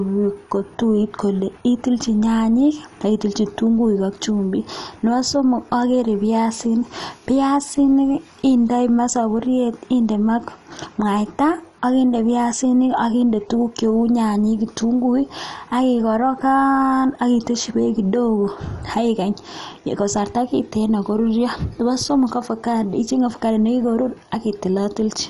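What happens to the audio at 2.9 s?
At 2.9 s the speech carries MP2 compression artefacts, present throughout. It sounds dull and gurgling, with nothing above 11.3 kHz. Likely starved sub-bands, fitting about 48 kbps.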